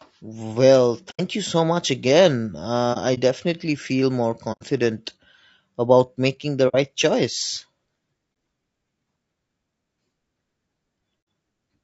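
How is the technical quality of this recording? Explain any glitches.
The speech is plainly degraded throughout, and six short dropouts break the audio.

Low-delay AAC compression, likely AAC-ELD at about 32 kbps, lacks the bits and frequency resolution for the harmonics, leaving the speech rough, grainy and noisy between harmonics.

AAC frame loss with muting: the decoder zeroed missing frames, so the sound fades into soft-edged holes. These occur at 1.10–1.20 s, 4.52–4.62 s, 6.68–6.75 s and 11.21–11.27 s, with a brief dip at 8.33 s. Between 2.93 and 3.19 s there are brief scattered gaps, none longer than about 30 ms.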